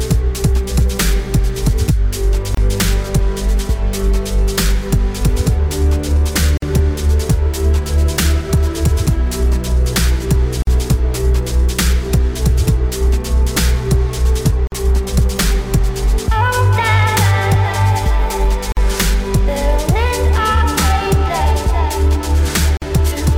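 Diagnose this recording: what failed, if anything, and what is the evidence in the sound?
The converter's clock is failing with periodic clock jitter. Throughout, the sound has a rough, metallic edge that drops out in the quiet bits. That fits the sample clock being wobbled at around 1.5 kHz, which throws sidebands either side of everything, worst up top.

There's also a gap at a join of encoded pieces, from the codec stage. Short dropouts hit at 2.55, 6.57, 10.62, 14.67, 18.72 and 22.77 s, every 4 s. The first is about 28 ms and the rest 49 ms. Separately encoded chunks were butted together untrimmed, so encoder delay and end padding sit as silence, then the sound resumes.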